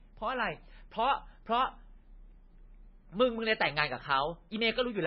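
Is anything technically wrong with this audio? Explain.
Yes. Throughout the speech, nothing reaches above 5.5 kHz, and the sound is watery and swirly with smeared onsets, likely from heavy MP3 compression. A bit budget this starved, consistent with roughly 18 kbps, forces a fixed treble cut and zeroes weak frequency lines that flicker between frames.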